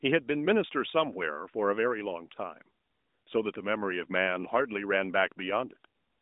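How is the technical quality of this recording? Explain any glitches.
No glitches or technical faults are audible here.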